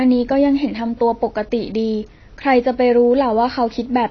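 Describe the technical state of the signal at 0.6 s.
At 0.6 s you're hearing AAC compression, which runs through the whole clip: nothing above 6.5 kHz, smeared sibilants and a fizzy, warbly texture, likely from an AAC-LC encode at a starved bitrate around 24 kbps that starves the spectrum and leaves holes.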